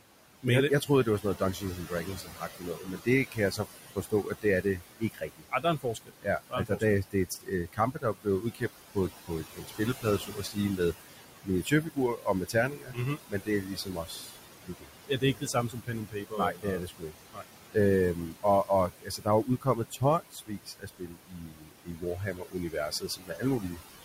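Noise suppressor artifacts run through the whole speech clip: a suppressor pulls the room noise, which sits about 13 dB below the voice, down by about 17 dB between words, so the noise sinks between the words and rises under them. Speech cut by the noise suppressor starts after "jeg jeg", spanning 0.81 to 8.62 s, then recurs at 8.95 to 10.8 s, 11.43 to 17.76 s and 18.14 to 23.81 s. The suppressor misreads quiet speech as noise and dips it by about 16 to 19 dB, leaving consonants and word endings swallowed for roughly three seconds in each longer span.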